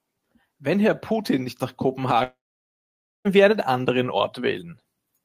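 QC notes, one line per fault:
0.62–4.19 s, automatic gain rising: speech and background noise swell together by about 7 dB over more than three seconds as the gain control judged the input too quiet. On the waveform, the envelope and noise floor widen steadily in step.
2.23–3.27 s, long network dropout: about a second of audio never arrives, likely a network outage. A short fading buzz or hiss continues the last sound, then 0.9 s of silence before speech resumes further on. The spectrogram shows a smeared decaying band, then a blank gap.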